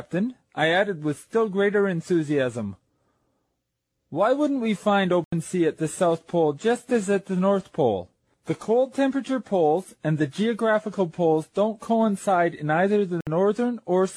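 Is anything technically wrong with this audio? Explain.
Yes. The sound cuts to silence twice, from 5.24 to 5.32 s (81 ms) and from 13.21 to 13.27 s (61 ms). This is likely a Bluetooth dropout: late packets were discarded, which fits a few lost packets each time. Playback resumes further along, as if it had kept playing, rather than picking up where it stopped.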